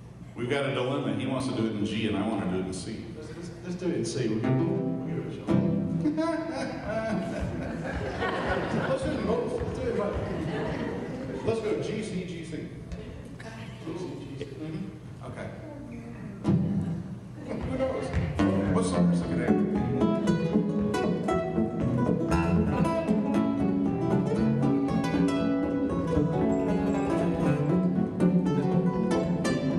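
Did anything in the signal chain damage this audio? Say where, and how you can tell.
No, nothing in the signal chain damaged this audio.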